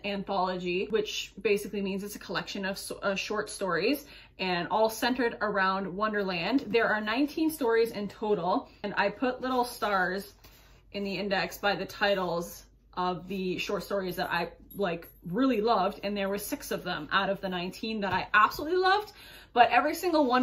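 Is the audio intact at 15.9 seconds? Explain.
Yes, the audio is intact at 15.9 seconds, with no dropout, click, distortion or other fault audible at that moment.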